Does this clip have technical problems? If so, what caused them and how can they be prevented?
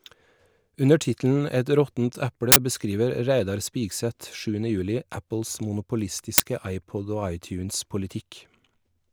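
Yes. The speech is interrupted twice by an uninitialised buffer fault, from 2.52 to 2.56 s and from 6.38 to 6.40 s. Each is a short, loud crack that replaces the speech for 40 ms and then 20 ms. A block of the output buffer was sent to playback before any audio had been written into it, so whatever stale memory occupied those locations was played out as sample values. To prevent this, clear every buffer to zero when it is allocated and never hand a block to the output until it has been completely filled.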